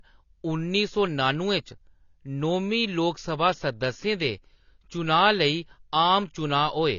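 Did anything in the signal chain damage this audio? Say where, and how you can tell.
Yes: AAC compression throughout the speech, at the codec stage. Nothing remains above 6.9 kHz, and sibilants sound smeared and fizzy, likely from AAC-LC quantising its frequency lines too coarsely at a low bitrate, which fits roughly 24 kbps.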